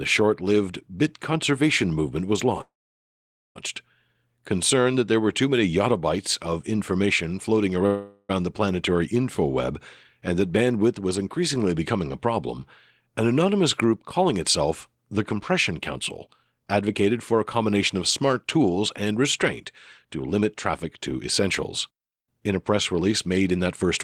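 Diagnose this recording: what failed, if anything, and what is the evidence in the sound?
Two call audio freezes interrupt the speech, at 2.61 to 3.57 s and 7.86 to 8.31 s, most likely from packets stalling on the network until the jitter buffer ran dry. The receiver stretched the last sound into a fading buzz. In the first, the buzz lasts only briefly before about 0.85 s of near-silence. In the second, the buzz decays across nearly all of its 0.43 s. On a spectrogram each shows frozen horizontal harmonic bands that fade into blank. Nothing is lost, so everything afterwards runs late.

A jitter buffer speed-up follows in three stretches: 16.28 to 19.44 s at 107 % speed, 20.05 to 21.43 s at 107 %, and 21.88 to 23.84 s at 109 %. The receiver's buffer was trimming excess delay by cutting out pitch-period-sized slices over and over, about 0.2 s, 0.1 s and 0.2 s in total. The speech sounds hurried but keeps its pitch. 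A spectrogram shows harmonic lines at unchanged frequencies with syllables packed closer together in time, and the waveform shows tiny splice points between periods.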